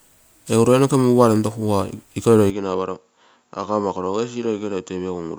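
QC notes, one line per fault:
throughout: generation loss. The speech has a swirly, smeared, hollow quality, and consonant attacks are soft, more than a single MP3 pass at 128 kbit/s would explain. This is likely from about three rounds of re-encoding, with artefacts stacking on shifting frame grids.
2.50–5.38 s: input switched to a poorer device. With no gap at the switch, the sound turns duller and narrower, with nothing above about 7.4 kHz. It drops about 5 dB and gains a faint new noise floor, likely from another microphone or a headset's call profile.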